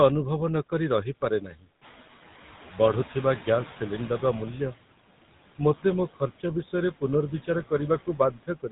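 Throughout the clip, the speech has passed through the GSM full-rate codec, which rebuilds the voice from a vocal-tract model driven by coarsely spaced pulses. The band stops near 3.9 kHz, and the speech has a plainly audible buzzy, gravelly roughness, consistent with the 13 kbps full-rate coder.

Noise suppressor artifacts also run through the whole clip. The suppressor pulls down what it judges to be steady noise by about 16 dB, frame by frame. The background dips between phrases and swells beneath them.

From 1.41 to 1.66 s, the suppressor mistakes part of the speech for noise and turns it down by up to about 14 dB. Roughly 0.15 s of soft detail sounds swallowed.

From 1.81 to 4.52 s, the noise suppressor is catching up. The room noise jumps by about 11 dB around 2 s, and the suppressor's estimate trails behind for about 2.7 s. The noise comes through louder at first, with only about 12 dB of reduction, then settles lower.

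Speech cut by the noise suppressor recurs from 6.64 to 6.74 s, a brief dip of up to about 11 dB. It happens again from 8.07 s to the end, where the drop reaches about 18 dB and around a fifth of a second of speech sounds faint.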